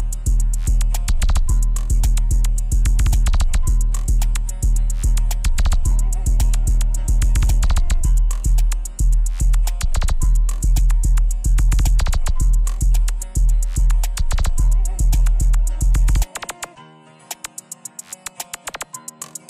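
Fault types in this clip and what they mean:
Nothing to flag here; I didn't hear any technical faults anywhere in this audio.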